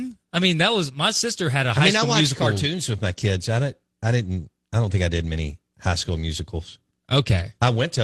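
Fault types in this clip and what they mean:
The speech shows no faults; it carries the ordinary coding texture of a working call path, with the top end stopping at about 12 kHz, which fits Opus running at around 24 kbps.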